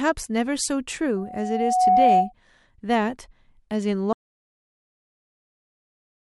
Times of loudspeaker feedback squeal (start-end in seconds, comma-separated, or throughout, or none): 1.16-2.33